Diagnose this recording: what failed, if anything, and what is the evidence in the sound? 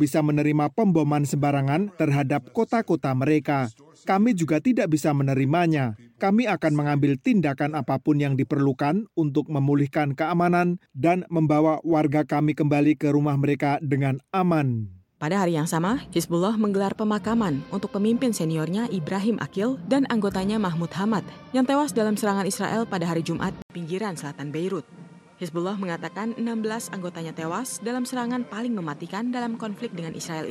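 At 23.62 s the sound drops out for 80 ms, then resumes duller and about 5 dB quieter, with nothing above 12.1 kHz and a different noise floor sitting only around 40 dB under the signal. This persists to the end. The stage is the capture device at the driver level: the likely cause is an input switched to a poorer device mid-recording, with its narrower band, own gain and own background noise replacing the original microphone.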